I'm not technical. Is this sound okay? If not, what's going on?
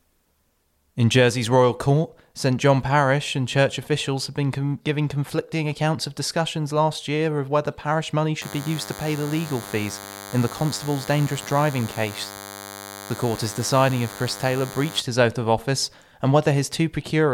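No. From about 8.42 to 15.0 seconds, after "of whether parish money" and until "his oath of office", a thin, steady buzz sits under the speech. It is DECT cordless phone buzz. A nearby cordless phone sends radio pulses 100 times a second, and the recording equipment picks them up as sound.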